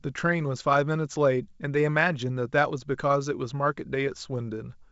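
No faults: the speech passes through G.722 wideband telephone coding with nothing above 7.7 kHz, and any coding damage is faint at most, which fits the full 64 kbit/s mode.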